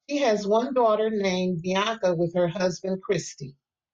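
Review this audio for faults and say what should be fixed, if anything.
Nothing stood out on listening to this speech recording, so there is nothing here that needs fixing.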